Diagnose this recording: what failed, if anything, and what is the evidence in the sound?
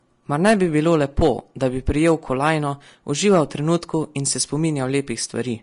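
The whole recording sounds hissy and grainy, with roughened tones and smeared consonant onsets, and there is nothing above about 10.5 kHz. That points to the codec stage, most likely Vorbis compression at a low rate, consistent with around 36 kbps. The encoder lowered its cut-off and quantised the remaining treble so coarsely that fine high-frequency detail was replaced by noise of similar energy. This left the band-limited, grainy texture across the speech.

Hard clipping appears twice, on the peaks. The first runs from 0.45 to 1.28 s, just before "da bi", and the second from 3.26 to 3.75 s, just before "in se". The level there exceeded what a converter or sample-format stage could pass, by about 6 dB and about 4 dB respectively. The peaks were sliced flat, and those flat tops add a spray of upper harmonics that is heard as distortion.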